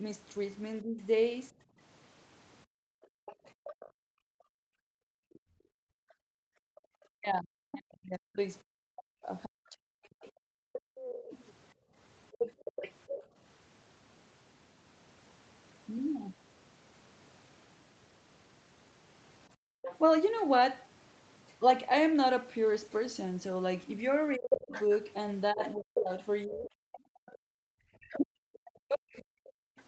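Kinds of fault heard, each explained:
Speech suppressed in double talk: the echo canceller likely could not tell the talker apart from loudspeaker echo while both sides spoke, so it turned everything down. The speech dips by something like 40 dB, thins or breaks into pieces over roughly four seconds between 0.82 and 11.34 s, and again for about three seconds between 24.36 and 29.52 s.
Background gated by the echo canceller: with the loudspeaker active, the canceller clamped the microphone hard, and the room sound drops by up to about 39 dB in short holes. This happens for around two seconds in total between 1.55 and 6.82 s, briefly between 10.56 and 13.37 s, for about 0.3 s at 19.55 s, and for a moment at 27.01 s, each time coming back once the canceller releases.
Other side's voice leaking through: the canceller did not fully remove the loudspeaker playback, so a second voice likely reaches the microphone. 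It sits about 20 dB under the talker from 3.02 to 6.8 s, closer at about 10 dB under from 10.73 to 13.26 s, appears as a scrap at 19.82 s, and from 24.5 s to near the end it is only about 5 dB below, nearly competing with the main speech.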